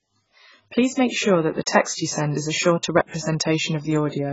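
From start to finish the speech sounds dull and smeared, with nothing at all above 7.6 kHz and a warbling, fizzy texture on sibilants and held sounds. That pattern points to heavy AAC compression, likely AAC-LC at a very low bitrate. The encoder ran short of bits, so it pulled its cut-off down and left holes in the spectrum or filled bands with substitute noise, and the coarsely quantised bands shift from frame to frame, which gives that swirly artefact.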